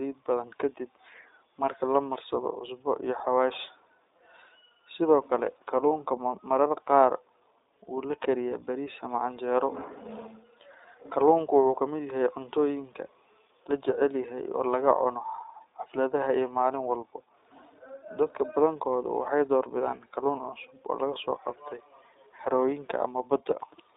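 Throughout, the speech carries iLBC codec coding: a band of about 300 Hz to 3.7 kHz, nothing above 3.8 kHz, and a plainly audible rough, synthetic edge from each 20 ms frame being coded on its own, which fits the 15.2 kbps mode.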